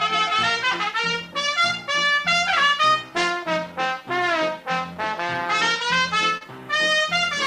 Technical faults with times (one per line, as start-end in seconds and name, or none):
4.93-4.97 short concealed packet loss
6.37-6.43 short concealed packet loss